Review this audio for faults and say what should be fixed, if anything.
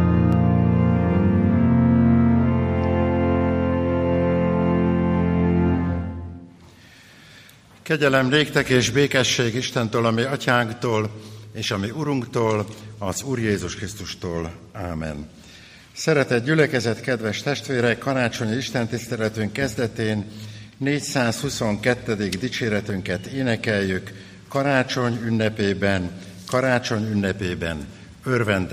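Dropped samples at 0.33 s, 11.05 s and 22.90 s: each is a single sharp click, visible as a thin vertical line across the spectrum. The likely cause is a tiny gap in the stream, only a fraction of a millisecond, so the waveform jumps straight from one value to a later one. That step is too brief to remove any audible sound, but the discontinuity itself is heard as the click. To prevent it, give the capture or transfer path enough buffering that it never underruns.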